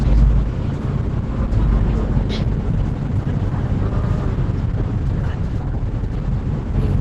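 Opus compression runs through the whole clip. Nothing reaches above 12 kHz. The sound is muffled and hoarse, with rough, grainy textures. That points to Opus in its hybrid mode at a very low rate, likely around 12 kbps.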